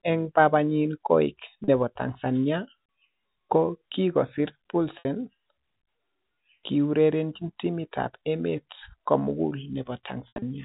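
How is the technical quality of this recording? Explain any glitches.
Three dropouts from packet loss with pitch repetition interrupt the recording, heard through a telephone-band G.711 channel that passes nothing above 4 kHz.

At 1.64 to 1.68 s, 40 ms is lost. At 4.99 to 5.05 s, 60 ms is lost. At 10.28 to 10.42 s, 120 ms is lost in bursts spread over 140 ms, the longest run lasting 80 ms. The losses fit 10 ms packets. To fill each gap, the receiver loops the last pitch cycle and fades it down over about 50 ms. The shortest gap sounds like a brief buzzy hold, and the last gap fades toward silence before the audio cross-fades back. On a waveform, identical cycles repeat and shrink. On a spectrogram, the harmonic stripes freeze flat.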